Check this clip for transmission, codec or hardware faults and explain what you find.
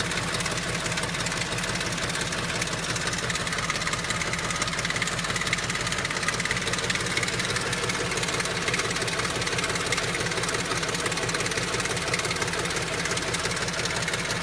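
Nothing found: no transmission, codec or hardware fault is audible anywhere in the clip.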